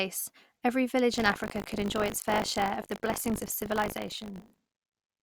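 From 1.12 s to the end, buffer tearing adds a steady 50 Hz robotic buzz to the speech. Writer and reader have slipped, so each 20 ms buffer briefly replays older audio.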